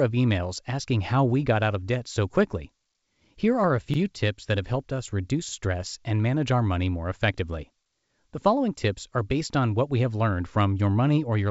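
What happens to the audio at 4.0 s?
The audio was handled in chunks that overlap, so each new block, about 4 s long, begins before the previous one has finished. At the join from 3.94 to 3.99 s, right after "are a" and just before "tips that have helped", the same 50 ms of sound plays twice in a row. That doubled sliver comes through as a brief click or stutter at the seam, against the call codec's band-limited sound, which stops at 8 kHz.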